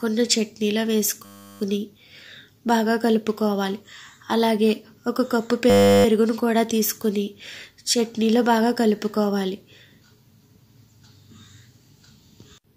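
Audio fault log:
1.25–1.61 s and 5.70–6.05 s, system hang loop: the system stalled while playback kept recycling a 10 ms buffer, repeating one slice to produce a steady 100 Hz buzz.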